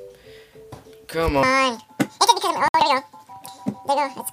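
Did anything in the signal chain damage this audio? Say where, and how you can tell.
Yes. From 1.43 s to the end, the sound plays at 1.97 times its original speed and jumps up about ten semitones, with tempo and pitch shifting together. That marks a section at the wrong speed, likely from playback or editing resampled against the wrong clock.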